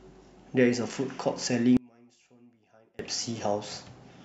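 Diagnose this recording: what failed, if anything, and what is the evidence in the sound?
From 1.77 s to 2.99 s the speech collapses, falling by about 31 dB and leaving only a faint residue before the level returns. That drop is what one channel inverted sounds like once the stereo pair is folded to mono: the centred speech, identical in both channels, cancels almost completely, and only small inter-channel differences survive. The stage is likely analogue wiring, a polarity-swapped connection on one leg during that interval.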